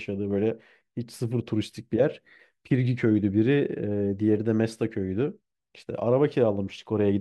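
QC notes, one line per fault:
No faults heard anywhere in this speech recording.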